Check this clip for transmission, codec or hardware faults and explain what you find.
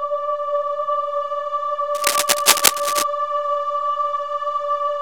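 A hardware fault, most likely a worn cable, connector or control being disturbed, produces cable scratch noise from 1.95 to 3.04 s. As the poor contact shifts, its resistance jumps about rapidly and unevenly, so dense, irregular bursts of noise ride on the signal for roughly a second. The bursts sit a few decibels above the audio itself, so a harsh scratching, rustling texture dominates that stretch.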